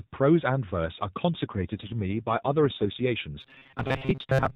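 From 1.34 s to 3.03 s an AMR rate drop sets in. The narrowband mobile codec's 4 kHz band and continuity stay intact, but the speech turns rougher and more synthetic. That fits the codec stepping down from 12.2 to 5.9 kbps, with fewer bits left for the vocal-tract model, then recovering.

From 3.41 s to the end at 4.55 s the speech becomes a rigid, metallic buzz fixed at 133 Hz that still loosely tracks the syllables. This is robotic sound from repeated short buffers, likely caused by late-arriving audio being padded by looping roughly 7.5 ms segments, with about half of the real signal skipped.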